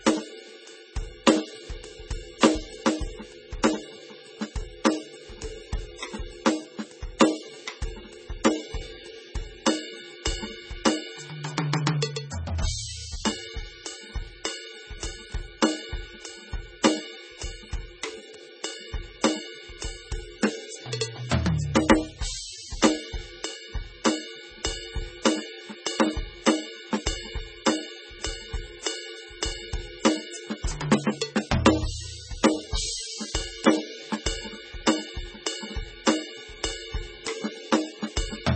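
MP3 compression runs throughout this music clip and is likely the cause of its heavy damage. Nothing reaches above 8.3 kHz, where the encoder has cut the treble to save bits, and the damage is severe enough to point to a bitrate somewhere near 17 kbps. With so few bits, weak frequency lines drop in and out between frames, giving a watery, swirling texture, metallic chirping on bright sounds, and smeared attacks.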